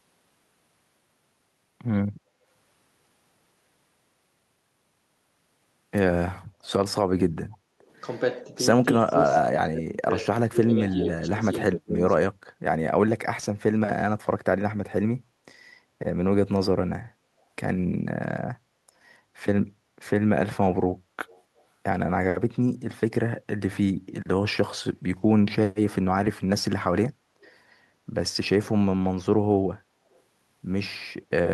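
Speech. Faint delayed copies of the voice surface at 7.52–7.57, 9.09–9.13, 27.44–27.54 and 30.12–30.21 s. They trail by 273 ms at about 30 to 40 dB below the talker, likely an echo leak past a loudspeaker-side echo canceller. The room background dips by about 14 dB at 7.57–7.87 s and about 15 dB at 12.33–12.6 s, which is background gated by the echo canceller as it clamps the microphone during playback. Between 8.39 and 12.06 s the talker's voice is turned down, totalling around two seconds and falling by roughly 30 dB at worst. This is likely speech suppressed in double talk, where the canceller mistook overlapping talk for echo.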